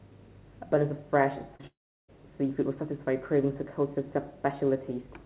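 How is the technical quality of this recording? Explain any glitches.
The recording has audible glitches: a cluster of packet-loss damage between about 1.56 and 2.10 s in the speech. The whole clip is band-limited to a telephone-style range with nothing above 4 kHz, which fits a narrowband call codec such as G.711.

Short concealed packet loss occurs twice in a row, from 1.56 to 1.61 s and from 1.61 to 1.65 s. About 40 ms and then about 20 ms of audio failed to arrive in time. The receiver patched each gap by extending the preceding sound and blending back into the real signal. You hear a quick smear or wobble rather than a gap. That is what separates it from the dropout that follows: the patch is brief, and no silence opens up.

A long network dropout, the likely cause, follows from 1.67 to 2.10 s, roughly 0.42 s of missing audio. The receiver first continues the last sound as a fading buzz or hiss. 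Once that concealment gives out, about 0.36 s of near-silence remains. The speech then resumes further along, with the lost portion simply absent. The audible hole and the skipped content are what distinguish it from the short concealed losses just before it.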